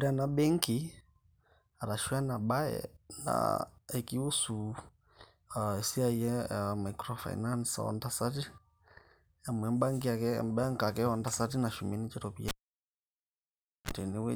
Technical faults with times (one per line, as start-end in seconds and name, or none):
12.48-13.91 cable pulled and plugged in